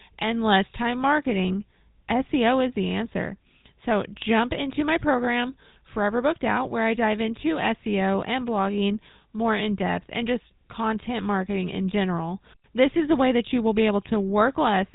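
Speech, carried throughout by the GSM full-rate codec, with plainly audible damage. Its pulse-driven vocal-tract model gives the voice a buzzy, gravelly roughness, consistent with GSM's 13 kbps mode. On a spectrogram, everything stops at a hard ceiling at 4 kHz.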